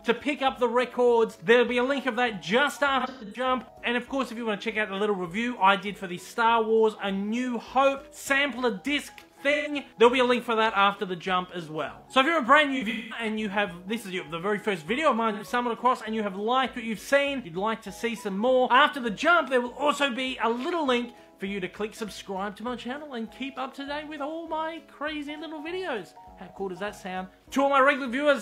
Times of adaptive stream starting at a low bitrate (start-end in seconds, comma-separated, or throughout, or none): none